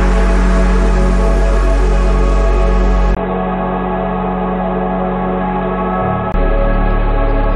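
At 3.15 s there's a brief gap of about 20 ms, and then the sound goes dull and boxy, with nothing above 3.9 kHz, a few dB quieter, and a faint new noise floor sitting well below the signal. That's most likely an input switched to a poorer device, a narrower-band mic or headset profile with its own tone and background. At 6.34 s the full bandwidth and original level come back.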